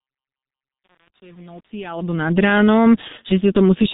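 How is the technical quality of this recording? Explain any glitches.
Technical quality is poor: the speech passes through heavy G.723.1 coding for its whole length, and one short dropout late in the clip has been patched over by the codec's concealment.

G.723.1 codec: Throughout, the speech sounds muffled and hoarse, with smeared consonants, which fits the low-rate 6.3 kbit/s mode. The codec models the voice in coarse 30 ms blocks and discards everything above 4 kHz, so a spectrogram shows an empty band above that line.

VoIP packet loss concealed by the speech codec: From 3.08 to 3.14 s, the speech is briefly stretched and weakened. The gap fits a single lost 30 ms frame. The decoder filled it by repeating its last pitch and filter at falling gain. The waveform shows a dip in amplitude that recovers slowly after 3.14 s.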